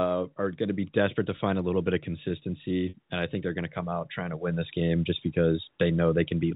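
At 2.89 to 2.94 s, just before "and I think they're", packet loss with pitch repetition fills a 50 ms gap. The last pitch period repeats, giving a brief held, buzzy tone.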